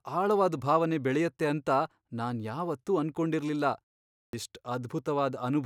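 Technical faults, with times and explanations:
4.27–4.33 s, clipped start after a pause: during the 0.51 s of silence before this point, the output device went idle, and when sound resumed it needed time to wake and lock onto the stream again. About 62 ms of audio was lost while it did so. The speech therefore jumps in abruptly out of silence, with its first sounds missing and no natural onset.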